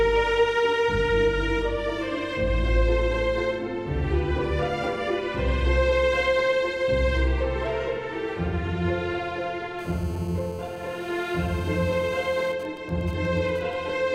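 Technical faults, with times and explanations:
9.79–12.52 s, GSM phone buzz: a hard, raspy buzz at 217 Hz, rich in harmonics and about 20 dB below the programme, holding steady and unrelated to the sound. A nearby 2G phone in a call transmits 216.7 bursts per second, and the audio circuitry rectifies each radio pulse.
12.53–13.74 s, GSM signalling bursts: the steady buzz breaks into even ticks with a longer 217 Hz buzz twice a second at roughly the same level. The phone is still in the call but its user has gone silent, so it sends only short groups of bursts, which the circuitry again rectifies.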